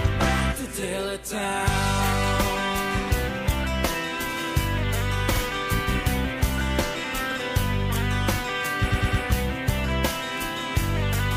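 At 5.35 s and 7.30 s, a 52.2 ms stretch of sound plays twice, and from 8.90 to 9.21 s a 104.5 ms block plays four times. These are repeated frames: compressed frames were written again. Unlike a dropout, nothing is lost; the same audio stutters and the clip lengthens.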